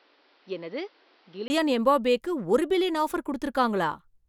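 Up to 1.5 s it's dull, quieter and cut off above 5.8 kHz, likely the input switched to a poorer device. After a 20 ms gap, "எம்பாப்பேக்கு ஒரு பில்லியன் ஆஃபர்" comes in clear.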